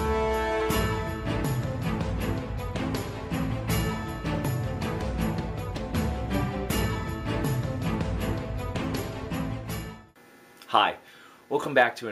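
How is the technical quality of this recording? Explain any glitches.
Two brief glitches: at 0.60 to 0.62 s and at 5.79 s, each a corrupt frame decoded. Bit errors in a compressed frame misplace energy across frequencies, giving a chirp, squeak, blip or burst of noise, louder at first (around -20 dBFS) than later, unlike a flat click or dropout.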